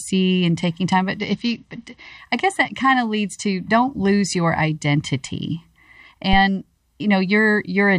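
A Bluetooth SBC bit pool drop runs from 1.19 to 2.18 s. Squeezed for bandwidth, the encoder starves its highest sub-bands and quantises the rest coarsely, so the speech turns dull and gritty, consistent with the bit pool falling from around 28 to 9, before clarity returns.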